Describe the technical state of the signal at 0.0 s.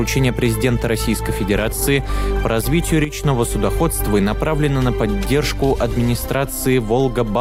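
The signal is intact at 0.0 s, with no audible fault at that point.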